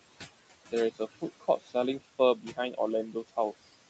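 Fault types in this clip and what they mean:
Noise suppressor artifacts: Throughout the clip, the suppressor decides frame by frame which frequency bands hold steady noise and pulls them down by about 20 dB. The room noise falls away between phrases and comes back under the speech. On a spectrogram the background in the gaps breaks into scattered, flickering specks instead of an even haze. In the waveform the quiet stretches sit close to silence, and the noise swells back as the speech starts.
Speech cut by the noise suppressor: At 1.4 to 1.75 s, 2.38 to 2.79 s and 3.12 to 3.38 s, the suppressor mistook quiet parts of the speech for noise and turned them down along with the background, by about 17, 16 and 19 dB at the deepest. Those moments sound swallowed or faded. On a spectrogram the speech energy thins into patchy holes there, and the waveform envelope dips sharply where it should stay full.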